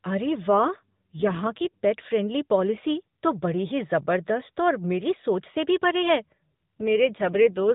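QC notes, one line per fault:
0.50–1.79 s and 6.80–7.63 s, AMR rate drop: the speech turns rougher, buzzier and more synthetic for about 1.3 s and then about 0.8 s, with no gap and no change in bandwidth. This sounds like the codec being switched to a lower mode, which fits a fall from 12.2 to 5.9 kbps. With fewer bits to describe each frame, the vocal-tract model and its pulse excitation are coarser. The lighter coloration of the narrowband AMR-NB path returns each time the rate recovers.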